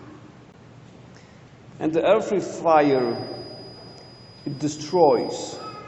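A gap between stream segments occurs at 0.52 s: a hard-edged hole of about 15 ms of silence breaks into the audio where two 2-second segments fail to meet in time, so the player fills the join with silence and nothing is lost. From 2.67 s to the end, a feedback whistle sits behind the sound. It is a thin, steady tone at 4.9 kHz, roughly 25 dB below the main signal and slowly swelling and fading in level, likely from a loudspeaker-to-microphone loop held just short of runaway.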